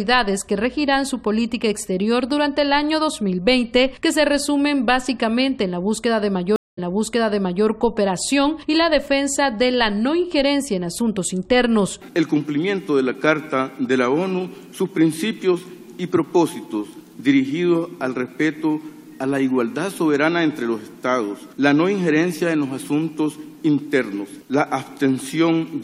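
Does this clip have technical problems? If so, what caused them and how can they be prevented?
Yes. A stream reconnect occurs from 6.56 to 7.66 s. The sound drops out for about 214 ms. It then resumes 882 ms earlier, repeating a stretch, as a fresh decoder restarts from a resent burst. Prevention: use a larger client buffer and resume from the exact byte offset.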